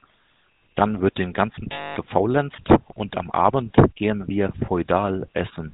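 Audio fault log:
throughout: GSM full-rate codec, about 13 kbps; vocal-tract model driven by sparse pulses strips content above 4 kHz, leaving plainly audible buzzy, gravelly roughness on the speech.
1.72–1.97 s: lost GSM frames, about 240 ms after "wird den ganzen"; last good frame repeated gives a rough metallic ring before "gefaulenzt und am".
4.66 s: lost GSM frame, one 20 ms gap after "gehen wir"; the previous frame's settings are held briefly, leaving a short metallic blip.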